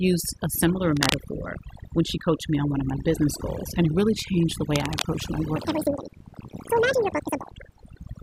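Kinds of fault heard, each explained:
Overdone noise removal: Noise reduction is set far too strong throughout. The background drops and breaks up into twinkling specks.
Cable scratch noise: Scratchy rustling bursts sit over the speech at 0.97 to 1.17 s, near speech level, and 4.75 to 5.02 s, slightly quieter. A worn contact is the likely cause.
Section at the wrong speed: From 5.56 to 7.51 s the speech runs 1.92 times fast, about ten semitones higher and hurried. It was likely played against the wrong clock.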